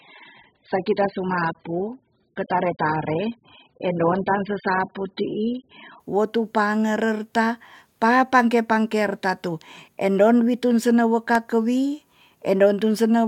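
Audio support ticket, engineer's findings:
Adaptive stream starting at a low bitrate, 0.0 to 6.0 s. Speech dull, nothing above 5 kHz, heavy codec artefacts; fits AAC near 8 kbit/s. At 6.0 s, abrupt jump to full quality, near 96 kbit/s, no gap or dropout, unlike a network stall.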